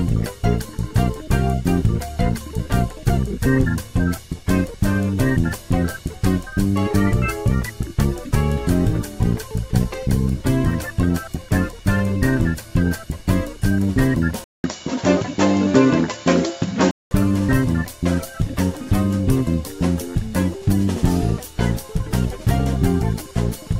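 From 14.44 to 17.11 s the sound turns duller, with nothing above 7.6 kHz, a 200 ms silence and a new noise floor well below the signal, likely from the input switching to a poorer device.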